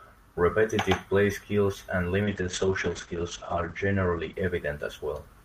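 At 2.27 s, after "play skills and", a call bitrate drop sets in. Highs above 8 kHz vanish. The speech turns muffled and rough, consistent with roughly 11 kbps.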